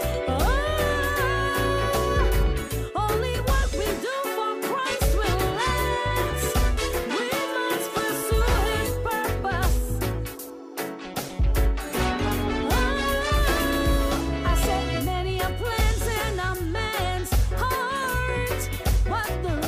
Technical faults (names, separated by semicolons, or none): video or display buzz